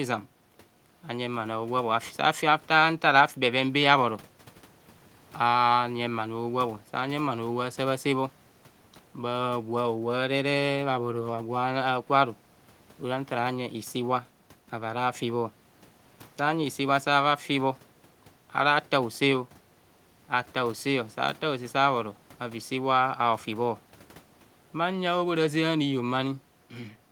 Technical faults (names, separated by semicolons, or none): none